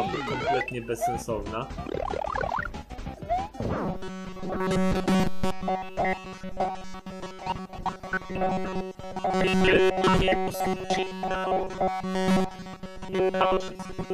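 Robotic sound from repeated short buffers runs from 3.86 s to the end, a rigid metallic buzz near 188 Hz, likely from roughly 5 ms buffers replayed over most of the audio.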